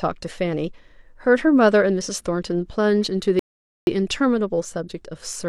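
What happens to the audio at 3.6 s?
A rebuffering stall runs from 3.39 to 3.87 s. Playback starved for data and paused. The speech drops to silence, then resumes exactly where it stopped, adding 0.48 s.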